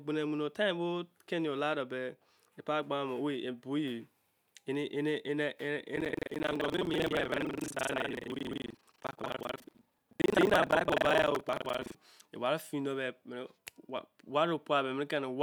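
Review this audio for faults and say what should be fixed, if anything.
Buffer tearing runs from 5.93 to 11.96 s. The speech carries a rough, robotic buzz at 23.4 Hz, which fits a 2048-sample buffer. The write and read positions have slipped, so about half of each buffer replays audio from roughly 150 ms earlier, with hard joins on both sides.

Keeping the write pointer locked a safe margin ahead of the hardware read position, with detection and resynchronisation when that margin collapses, prevents it.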